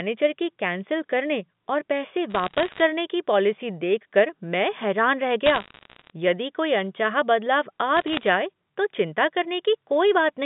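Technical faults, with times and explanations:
2.3 to 2.8 s, bit errors on a digital phone line: a short burst of sharp ticks and crackle sitting on top of the speech, which itself carries on untouched. Each flipped bit corrupts a single sample.
5.46 to 6.1 s, bit errors on a digital phone line: the same crackle again, a touch longer. The error rate is low, around 0.7 percent.
7.97 to 8.23 s, bit errors on a digital phone line: a briefer, slightly sparser burst. The loudest ticks are where a sign or high-order bit flipped in the A-law stream, since the narrowband telephone coding itself is behaving.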